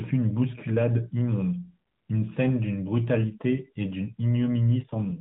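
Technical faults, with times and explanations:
4.84 to 5.20 s, AMR rate drop: The speech turns rougher and more synthetic near the end. There is no gap, and the narrowband band stays the same. This fits the codec stepping down from 12.2 to 4.75 kbps, trading detail for error protection on a weak link.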